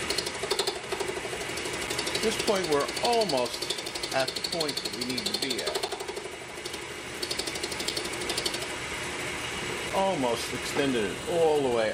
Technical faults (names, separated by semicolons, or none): gap between chunks